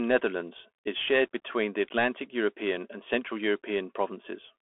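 The speech runs through a Bluetooth CVSD headset codec for the whole clip. The link carries a single up-or-down bit per sample with an adapting step, which fits a 64 kbps stream, and the audible band sits between 250 Hz and 3.4 kHz. The sound is thin and boxy with no low body or top end. Fast, loud high content outruns the step size and distorts, s sounds come out scratchy, and a granular hiss sits beneath the speech.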